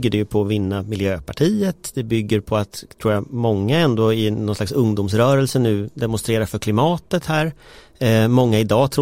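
No dropouts, glitches, level jumps or other technical faults turn up anywhere in this speech recording.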